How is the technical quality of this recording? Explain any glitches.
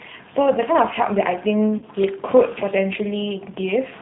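The quality is limited: it's speech through a narrowband low-rate codec, plus one short dropout.

The G.729 codec damage runs the whole clip and is plainly audible. Everything above 4 kHz is gone, and the voice has that slightly rough, synthetic edge you get when speech is rebuilt from a vocal tract filter, a pitch predictor and a few pulses per frame instead of the actual waveform. It sounds like the 8 kbit/s G.729A variant.

From 1.78 to 1.84 s there's VoIP packet loss concealed by the speech codec. About 40 ms of audio went missing, which fits roughly four lost 10 ms frames. The decoder bridged the gap by extending its last pitch and filter settings while turning the gain down, so that stretch turns into a brief, fading smear. Because each frame builds on the previous one, the voice stays weak and off just after the gap.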